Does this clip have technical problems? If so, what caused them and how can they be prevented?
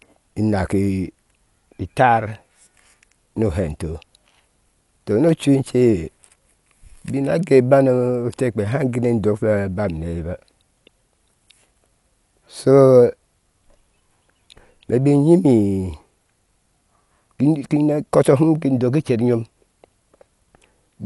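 Yes. The likely cause is Dolby Digital compression at a starved bitrate, consistent with about 64 kbps. The encoder narrowed the band and left many frequency lines without mantissa bits, which the decoder filled with dither noise. Throughout the clip, nothing sounds above 11.5 kHz, so the speech is dull and carries a rough, fluttering noise. To prevent it, encode at a substantially higher bitrate.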